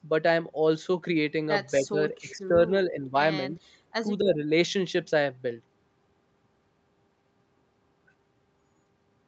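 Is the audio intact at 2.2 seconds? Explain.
No. Speech suppressed in double talk covers 1.79 to 2.57 s: the level dips by up to about 15 dB across roughly half a second in pieces, likely because an echo canceller, faced with both sides talking at once, turned everything down.

An echo leak also sits at 2.17 to 2.36 s: a faint copy of the sound returns 260 ms late, about 25 dB below the speech, likely from a loudspeaker echo that the loudspeaker side's canceller failed to remove fully.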